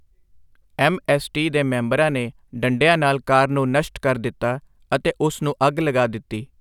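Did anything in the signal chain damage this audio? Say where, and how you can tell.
No, nothing in this speech recording stood out on listening as damage from any stage of the signal chain.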